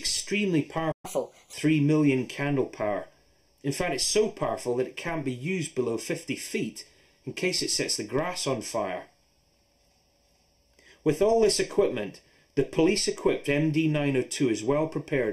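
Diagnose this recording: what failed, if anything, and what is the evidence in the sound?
Channel delay (comb filtering) at the analogue wiring or mixdown stage: one channel arrives roughly 0.4 ms late and the pair is summed to mono. Common content cancels at evenly spaced frequencies, the first notch around 1.5 kHz, leaving the audio hollow and phasey throughout.

A playback stall at the buffer stage: output goes silent from 0.91 s to 1.05 s, cutting the sound off mid-flow before it resumes. The likely cause is the player running dry or its thread being blocked, leaving a gap of roughly 120 to 140 ms.

Catch-up at higher speed in playback: from 1.05 s to 1.53 s the player resamples its backlog at 1.25x to recover lost time. Speed and pitch rise together, pitch by about four semitones, then drop back to normal at 1.53 s.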